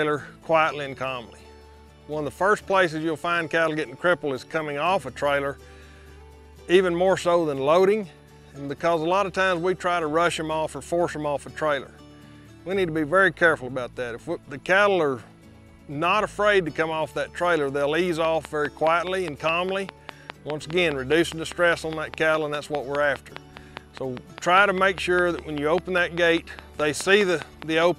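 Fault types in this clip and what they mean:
Train of clicks: from about 18.2 s to 27.8 s there's a steady ticking laid over the sound, close to five clicks a second, evenly spaced, around fifty in all. They stand well out, peaking something like 10 dB above the audio, and they're heard in the quieter gaps too. They all have the same sharp shape, so a single outside source is likely, most plausibly nearby equipment interfering or a faulty connection or power supply.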